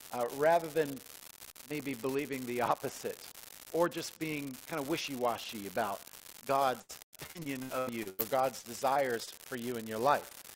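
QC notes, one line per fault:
Throughout: unreliable data bit. A marginal data line flips one bit in a random share of samples, so each error is a spike of identical size. The result is a steady crackle or fizz that continues into pauses. The waveform shows scattered equal-height spikes, and the spectrogram shows a broadband speckle across all frequencies.
6.81–8.21 s: repeated packet loss (robotic sound). Packets went missing again and again, leaving about 520 ms of gaps (the longest 96 ms) patched by extending the last sound. That covers roughly 37% of the stretch and sounds choppy, with pieces missing. The spectrogram shows smeared, repeated frames between brief stretches of real detail.
8.59–8.65 s, 8.93–8.97 s, 9.25–9.29 s: short concealed packet loss. Holes of about 40, 20 and 20 ms never arrived in time. Each was filled by continuing the preceding sound and then blending back, which is heard as a brief smear or wobble. 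The spectrogram shows short, flattened, over-smooth patches at each time.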